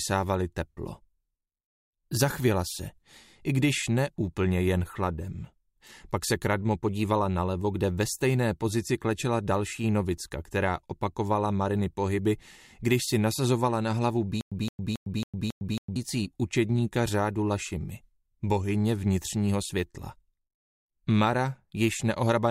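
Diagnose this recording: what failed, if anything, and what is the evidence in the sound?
The playback or stream buffer most likely stalled and replayed its last fragment on each retry, producing a stutter with silent gaps from 14.41 to 15.96 s. A 168 ms burst repeats five times every 274 ms, separated by 106 ms of digital silence, and the audio due in that span is lost.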